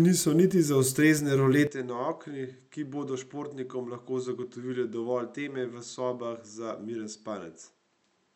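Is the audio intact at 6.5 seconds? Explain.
No. From 1.67 s right through to the end, the speech sounds like it's coming from a different, poorer microphone, most likely an input switched to a poorer device. Nothing comes through above about 7.9 kHz, so it's duller and boxier, and it's around 10 dB quieter, with a new background noise sitting roughly 45 dB under the speech. The change is instant, with no silent gap, and 6.5 s falls well inside it.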